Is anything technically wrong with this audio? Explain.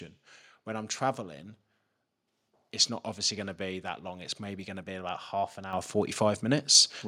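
Yes. At 5.73 s, right after "be about half an", the speech and background suddenly jump louder together by about 8 dB: the microphone volume stepped up as software raised the input level.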